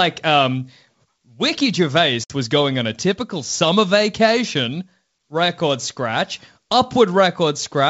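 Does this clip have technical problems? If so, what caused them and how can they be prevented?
Yes. At 2.24 to 2.33 s the speech falls into a hard-edged silent gap of about 60 ms. It returns just before "was going on a" with brief, slight distortion. This is packet loss on an ADPCM call. Several packets went missing, and the receiving decoder's adaptive predictor and step size drifted away from the sender's, taking some tens of milliseconds to settle. A jitter buffer with forward error correction, plus concealment that resets the decoder state, would prevent it.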